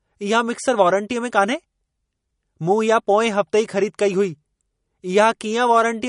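MP3 compression damage runs throughout the speech: nothing sounds above about 10.6 kHz, and the audio has a watery, swirling quality. The likely cause is a bit-starved encoder, near 40 kbps, cutting the treble and dropping weak frequency lines that flicker frame to frame.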